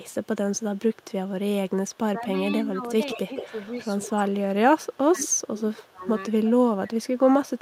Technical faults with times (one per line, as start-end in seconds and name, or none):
0.00-1.05 echo leak
1.68-1.98 echo leak
2.19-3.53 speech suppressed in double talk
3.10-4.06 echo leak
4.07-7.28 speech suppressed in double talk
5.19-5.90 echo leak